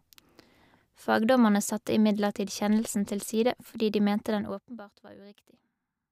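A speech recording where, from 4.32 to 4.84 s, the level drops by around 20 dB with an audible zipping tick riding on it. This is zipper noise: the gain falls in unsmoothed 2 dB jumps, around thirty per second, each jump clicking.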